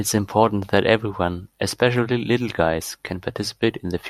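No audible technical faults anywhere in the speech.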